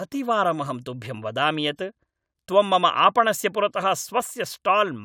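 Nothing stood out on listening to the speech in this recording.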